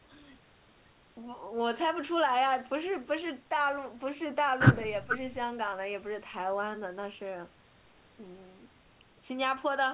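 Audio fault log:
No faults heard.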